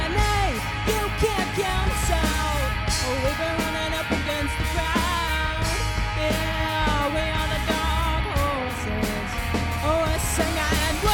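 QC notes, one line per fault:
Nothing to log: no fault found.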